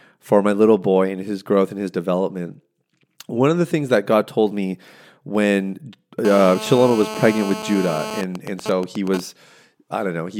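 From 6.25 to 8.19 s, just after "told me when", GSM phone buzz: a nearby phone in a call has its 217 Hz transmit bursts rectified, producing a raspy buzz about 11 dB below the speech, visible as evenly stacked harmonic lines. From 8.19 to 9.20 s, GSM signalling bursts take over as the talker falls silent: even ticks with a longer buzz twice a second, around 10 dB down, showing as evenly spaced vertical stripes in the spectrogram.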